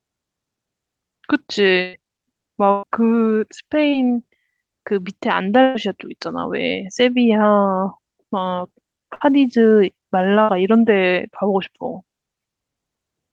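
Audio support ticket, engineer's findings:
Burst of packet loss at 1.81–1.95, 2.71–2.85, 5.62–5.77, 9.15–9.22 and 10.42–10.50 s. Receiver concealment stretches the last sound into a fading buzz or hiss over 120 ms gaps, 60 ms for the last two, with no silence. Audio resumes further on, content skipped.

Short concealed packet loss at 3.91–3.94 s. About 20 ms missing, patched by decoder extrapolation, heard as a brief smear or wobble before blending back.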